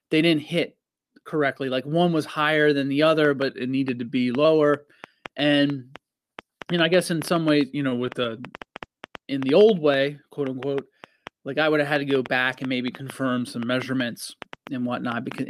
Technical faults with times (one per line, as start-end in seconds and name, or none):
3.25-15.50 train of clicks
3.49-4.45 drift correction step
7.63-8.88 drift correction step
7.89-7.93 short stall from a late packet
13.12-13.95 drift correction step